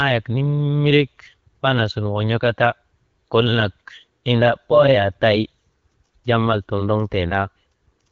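Nothing goes wrong anywhere in this speech, which comes across the way an HD Voice call does on the AMR wideband codec at 12.65 kbit/s, with only the light coding texture you'd expect at that rate.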